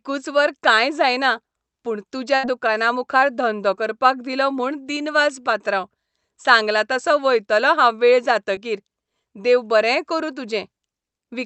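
At 2.35 s, just after "वर काय जायना पूण", a burst of packet loss removes about 80 ms of audio, ending at 2.45 s. The receiver fills the hole by stretching the last sound for roughly 80 ms and fading it down, so it sounds like a brief held buzz or fading hiss before speech jumps ahead to "दुकाना मुखार धंदो करपाक". On a spectrogram this looks like frozen, smeared bands that fade out, then an abrupt restart. The waveform shows a decaying envelope followed by a sudden onset.

At 8.55 s, right after "वयतलों हांव वेळ", a short concealed packet loss lasts until 8.59 s. About 20 ms of audio failed to arrive in time. The decoder patched roughly 13 ms of it from the preceding sound and then blended back into the real signal, so it passes as a quick smear or wobble. The spectrogram shows a thin vertical blur, and the waveform shows a kink. Throughout the clip, the Opus call path limits the audio band to about 8 kHz.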